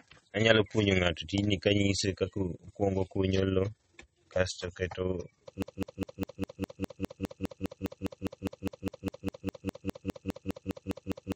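Throughout the clip there is overlap-add ripple: the speech was split into windowed frames and rejoined with an overlap that doesn't sum to constant gain. The level rises and falls by about 6 dB around 20 times a second, heard as a rapid, rough flutter.

Codec damage is also plainly audible across the whole clip, most likely from MP3 compression at a low bitrate, with the sound pointing to around 32 kbps. Nothing remains above 8.4 kHz, and weak spectral detail drops in and out between frames, giving a watery, swirly texture with smeared attacks.

At 5.62 s, right after "kasto oketo", a broken-record loop begins. A 0.2 s fragment (203 ms) repeats back to back 28 times until the end of the clip, likely because the player or stream stalled. The speech that should have followed is lost.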